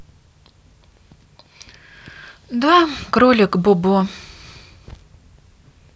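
No technical faults can be heard anywhere in this recording. The speech runs without any dropout, glitch or distortion.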